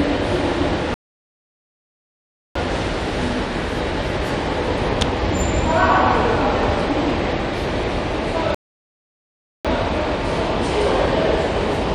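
At 0.94 s the sound cuts to silence until 2.56 s, a rebuffering stall of about 1.6 s. A second stall runs from 8.55 to 9.65 s, about 1.1 s. Each time, the player ran out of downloaded audio and waited. Playback then resumes exactly where it stopped. Nothing is lost. Time is only added.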